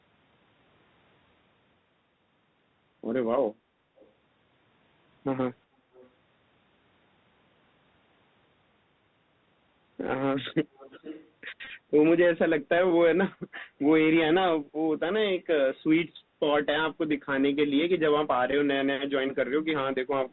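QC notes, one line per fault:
Throughout: Bluetooth CVSD headset codec. The band stops at 4 kHz, and a granular hiss sits under the speech. Sibilants turn scratchy, and loud bright sounds distort where the one-bit up/down steps cannot keep pace. This fits 64 kbit/s CVSD.
3.97–4.08 s, 5.94–6.09 s, 10.74–11.30 s: echo leak, a delayed copy of the speech returning 387, 411 and 444 ms late. It rises from about 35 dB below the speech to about 20 dB below in the longest stretch. The likely cause is a far-end loudspeaker whose echo canceller let residue through.
11.65–11.70 s and 18.51 s: Bluetooth headset packet repeated. In the first event, 41.2 ms of audio goes missing over 52.5 ms, and the longest run of about 20 ms buzzes near 267 Hz as stale packets replay every 3.75 ms. The second is a brief 11.2 ms glitch, about three packets' worth.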